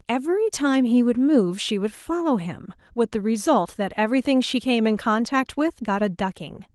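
No technical faults can be heard in the speech; it carries the light, steady character of Opus voice compression at around 24 kbps in hybrid fullband mode, with the upper band still present.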